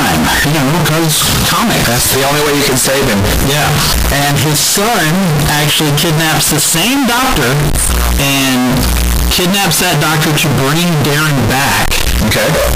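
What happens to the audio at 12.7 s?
At 12.7 s the speech is still caught in the same float read as integer fault that runs from the very start to the end of the clip. The sound is extremely loud and harsh, with background noise standing level with the speech, though pitch can still be followed. The cause is likely 32-bit float samples being read as 32-bit integers, so each sample's sign and exponent bits dominate its value. On a waveform this shows as a near-square block pinned at an almost fixed, high level regardless of how quiet the original was. A spectrogram shows dense broadband energy filling the whole frequency range, with the speech harmonics visible through it.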